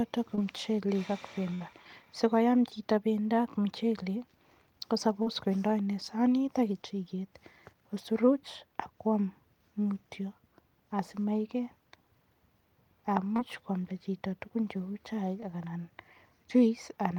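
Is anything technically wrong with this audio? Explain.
Yes. Speech is affected by two kinds of network loss.

Short concealed packet loss occurs at 0.35–0.38 s (just before "muchelek ak"), 5.22–5.27 s (just before "kotindo inei sanit ak"), 13.36–13.39 s and 15.40–15.42 s. Between 10 and 40 ms of audio never arrived in time, and the receiver extrapolated the preceding sound to fill each gap. The result is a brief smear or wobble that blends straight back in, shorter than the burst.

A burst of packet loss occurs at 1.54–1.61 s, right after "ko muchelek ak". About 60 ms was lost in a row. The concealment held the last sound and faded it as the gap lengthened, producing a dying buzz or hiss, and then the speech resumes further on with that section missing. The audible decay and the skipped stretch set it apart from the short fills.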